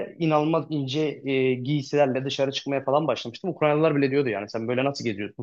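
No technical fault can be heard anywhere in the speech recording: its level, continuity and timing hold steady throughout.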